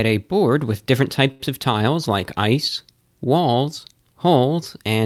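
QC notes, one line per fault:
1.31–1.43 s, short stall from a late packet: just after "a board with different", a packet arrived late and the jitter buffer ran dry, so the last sound is held for about 82 ms with a slight buzz or dip. Nothing is lost; playback resumes from the same point, running 82 ms later.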